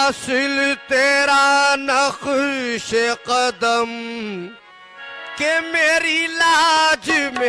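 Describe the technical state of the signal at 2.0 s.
At 2.0 s the signal is intact, with no dropout, distortion, noise burst or other fault.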